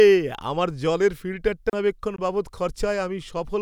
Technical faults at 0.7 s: none

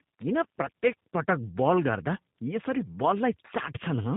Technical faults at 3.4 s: tandem speech coding

